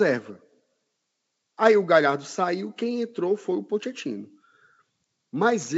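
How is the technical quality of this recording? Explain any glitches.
No glitches are audible in the speech; content stops at about 7 kHz, consistent with a G.722 call path, and nothing beyond that route's normal character stands out.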